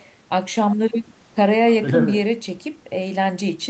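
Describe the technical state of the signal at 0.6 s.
At 0.6 s the speech is intact, with no dropout, distortion or glitch, only the steady band limit near 8 kHz that comes from the call path.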